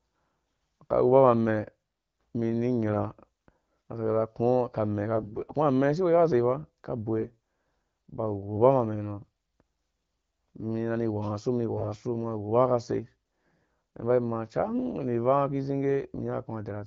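Speech coded with AMR wideband (HD Voice), which sounds clear and fits a 12.65 kbit/s mode, is hit by AMR bit errors in four short bursts: 5.14 to 5.53 s, 7.19 to 7.36 s, 11.72 to 11.87 s and 14.64 to 14.78 s. In each, the voice keeps roughly its pitch and level but turns hoarse and gargly. Flipped low-priority bits, a few percent of them, misplace the excitation pulses and skew the finer pitch, gain and spectral values.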